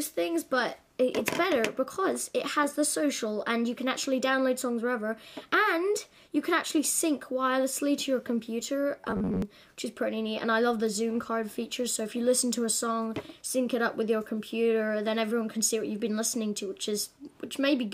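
From 9.01 to 9.42 s the audio turns into a rigid, metallic buzz at about 94 Hz, robotic sound from repeated short buffers, likely from roughly 11 ms chunks looping as about half the real audio is skipped. Unlike codec warble, the buzz rate stays fixed.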